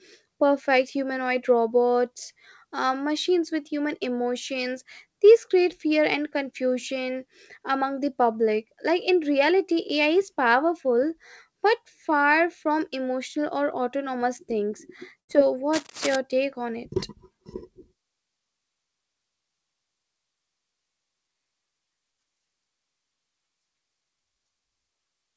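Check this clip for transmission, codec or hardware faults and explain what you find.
Two faults are audible in the speech, one from the network and one from the hardware, both carried over a wideband call path whose band stops at 8 kHz, consistent with G.722.

A burst of packet loss occurs from 15.20 to 15.29 s. Several consecutive packets never reached the playout point in time, so the receiver concealed the gap by extending the last received speech for about 84 ms and fading it down, which is heard as a brief held buzz or fading hiss. When audio resumes, roughly 90 ms of the original speech is missing.

Cable scratch noise runs from 15.73 to 16.16 s. It is heard as dense, irregular crackling and rustling over the speech, sitting roughly 10 dB below it. The likely cause is a worn cable, connector or control being moved, with its contact resistance jumping rapidly and injecting uneven noise bursts into the signal for that half-second.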